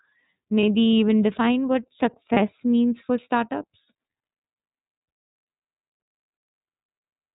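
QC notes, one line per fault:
throughout, iLBC codec: Nothing passes above 4 kHz. The speech sounds plainly rough and synthetic. The roughness fits iLBC's 13.33 kbps, 30 ms frame mode.
0.60–0.63 s and 2.33–2.38 s, lost iLBC frames: Each gap is a brief buzzy held sound. The decoder repeats the last pitch cycle with noise, which points to one lost 30 ms frame.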